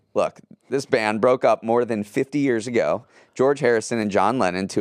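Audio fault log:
2.68 s and 4.02 s, dropped samples: a fraction of a millisecond of the stream is likely missing at each point, so the speech waveform jumps abruptly to a later value. Far too brief to remove any sound, each jump is heard as one sharp click, a thin vertical line across the spectrum.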